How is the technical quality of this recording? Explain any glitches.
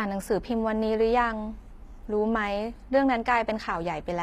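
The recording carries plainly audible HE-AAC compression damage throughout the speech. The upper band sounds synthesized rather than captured, likely from HE-AAC at a low bitrate, consistent with about 24 kbps. Its copied, coarsely shaped treble misaligns harmonics, making s sounds gritty and metallic. Nothing sits above 14.9 kHz.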